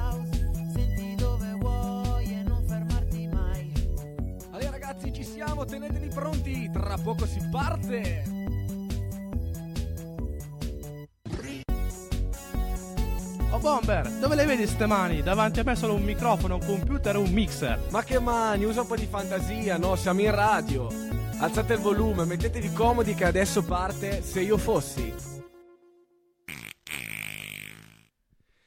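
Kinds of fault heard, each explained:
Nothing stood out as a technical problem on listening to the clip.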